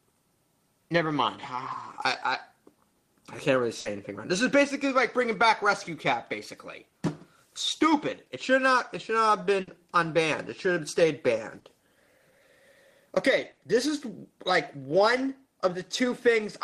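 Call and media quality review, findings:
Burst of packet loss at 3.79–3.88, 9.61–9.70, 11.59–11.68 and 13.51–13.60 s. The receiver's concealment extends the last sound for about 60 ms, fading it into a held buzz or hiss. Playback then resumes about 60 ms further on, with that audio missing.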